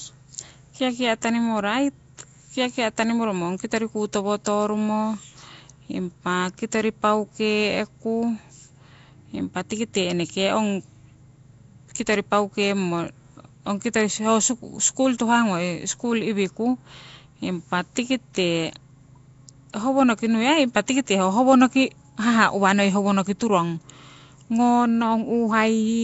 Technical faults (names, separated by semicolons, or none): Nellymoser compression; pre-echo